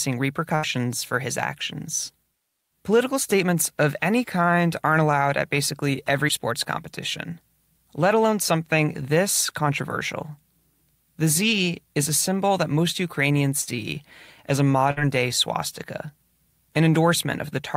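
At 13.61 s and again at 14.91 s, between "as a" and "day swastika", the speech suffers a burst of packet loss: consecutive packets never arrived in time. The receiver stretched the last sound for 60 ms, then 55 ms, fading it to a buzz or hiss, and about 60 ms of speech is gone each time. A spectrogram shows frozen, dimming harmonics ending in an abrupt jump; the waveform shows a repeating, decaying envelope.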